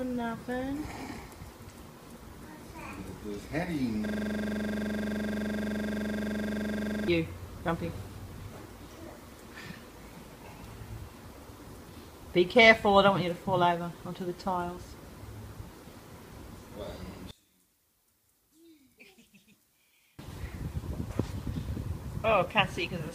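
From 4.06 to 7.08 s there's a system hang loop: a 42.67 ms slice repeats 71 times, giving a steady 23.4 Hz buzz, which fits a stuck 2048-sample buffer. Then from 17.31 to 20.19 s the sound drops about 28 dB to a faint residue, likely one channel inverted cancelling in the mono sum.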